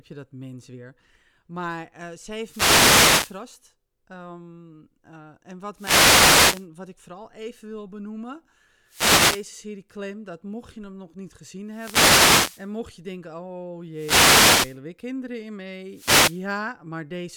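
Six wireless microphone noise hits interrupt the speech: 2.37–3.45 s, 5.74–6.68 s, 8.86–9.49 s just after "vooral even wil benoemen", 11.67–12.72 s between "je hem nog niet" and "je denken oh", 13.92–14.80 s before "weer kinderen in", and 15.88–16.47 s. Each is a swish of static lasting roughly half a second to a second, where the FM radio link faded and receiver noise rose over the voice. Unlike a steady noise floor or a digital dropout's silent gap, these bursts swell and recede.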